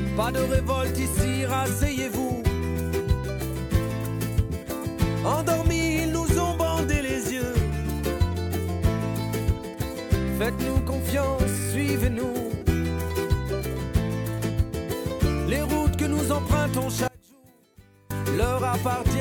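One channel inverted, from 17.08 s to 18.10 s: for about a second the audio collapses, dropping by about 28 dB before returning. The likely cause is reversed polarity on one side of the stereo pair. When the two channels are summed to mono, everything they share cancels, leaving only the small difference between them. That residue is a faint trace of the sound in place of the full signal, so the centre content and low end all but disappear.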